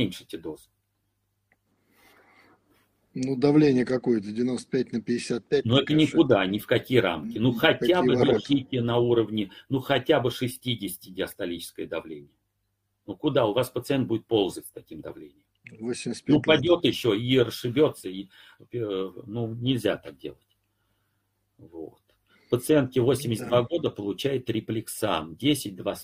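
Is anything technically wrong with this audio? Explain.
No, nothing technically wrong can be heard in this audio. There is no fault to point to at any moment in the recording.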